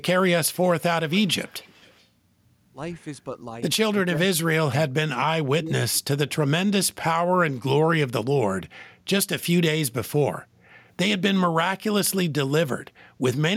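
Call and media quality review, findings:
Echo leak, 1.1–2.06 s: faint delayed copy of speech about 360 ms behind, roughly 25 dB down; likely residual echo past the far-end canceller. Spectrogram shows weak, lagged duplicate formant traces.

Speech suppressed in double talk, 4.04–4.52 s, 4.68–4.74 s, 5.6–6.17 s: speech dips or drops out in pieces, deepest around 30–35 dB; likely canceller attenuating both talkers. Waveform shows sudden envelope notches.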